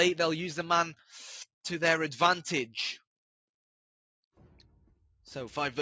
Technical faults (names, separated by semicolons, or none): none